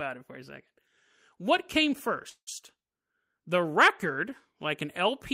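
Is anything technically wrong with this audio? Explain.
Yes. From 2.29 to 2.49 s there is a call audio freeze: the speech stalls into a fading buzz or hiss that drops to silence for about 70 ms, then resumes where it stopped, with nothing lost. This likely comes from packets arriving late and the jitter buffer emptying, adding about 176 ms of delay.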